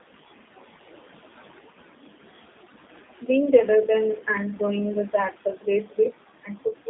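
Across the whole clip, a noise suppressor is pulling down whatever it judges to be steady background, band by band and frame by frame, by about 14 dB. The room noise, which sits about 15 dB under the speech, therefore drops away in the gaps and swells back up beneath the talker. These are classic noise suppressor artifacts.

The line is also coded with G.729, which models each short frame as a vocal tract filter plus a pitch predictor and a handful of pulses instead of sending the waveform itself. The damage is plainly audible, which fits an 8 kbit/s G.729A link. The band is squeezed to roughly 200 Hz to 3.7 kHz, the voice has a rough, buzzy, synthetic edge, and the residual noise picks up an extra warble from the codec.

At 5.32 to 5.67 s, just after "rather than and doing", the suppressor mistakes part of the speech for noise and turns it down by about 16 dB. About a tenth of a second of sound sounds swallowed. 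The same speech cut by the noise suppressor happens again at 5.85 to 6.13 s, with a drop of about 15 dB. Again about a tenth of a second goes faint.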